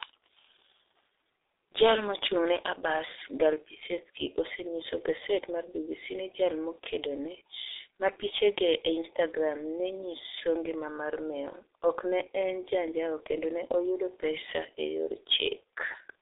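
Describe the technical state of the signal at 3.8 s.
At 3.8 s the speech carries G.723.1 codec damage, which runs through the whole clip. The codec models the voice in coarse 30 ms frames at a low rate, here consistent with about 6 kbit/s, so the sound is muffled and hoarse with smeared consonants. A spectrogram shows energy confined between 300 Hz and 3.7 kHz, with a hard empty ceiling above 3.7 kHz and blocky, blurred harmonics.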